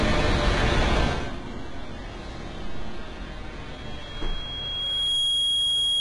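From the start, the everyday sounds have gritty, metallic treble with nothing above 11 kHz, likely HE-AAC compression at a rate that fits about 12 kbps, with rebuilt highs instead of simple dulling. At 3.72 s a loudspeaker feedback squeal begins: a steady 3.3 kHz tone swells over about a second and a half to roughly 10 dB above the sound and holds until the end. Unlike a fixed interfering whistle, it grows by itself.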